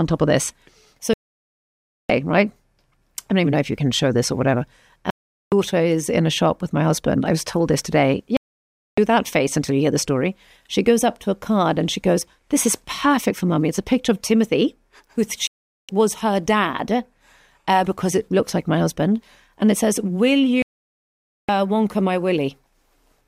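Five digital broadcast dropouts, at 1.14, 5.10, 8.37, 15.47 and 20.62 s, each muting the sound for 0.4 to 1 s while the receiver loses valid frames. Whatever aired meanwhile is simply gone.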